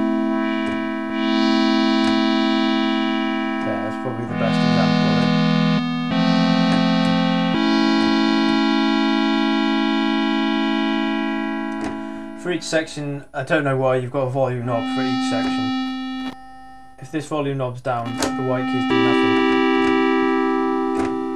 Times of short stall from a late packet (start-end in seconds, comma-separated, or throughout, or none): none